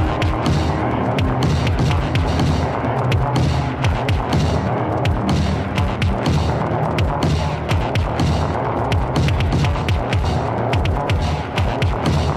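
Nothing goes wrong anywhere along the way here, with the sound simply running on untroubled by any technical fault.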